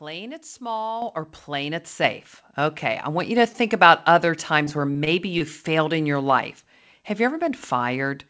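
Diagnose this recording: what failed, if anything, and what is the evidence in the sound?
Call processing stage: the microphone volume stepped up twice, at 1.02 s by about 9 dB and at 2.04 s by about 7 dB, as automatic gain raised the input in abrupt steps.

Network stage: repeated packet loss between 4.64 and 5.42 s leaves several holes, the longest 20 ms, each patched with continued sound, giving a choppy, robotic texture over the G.722 path's 8 kHz band.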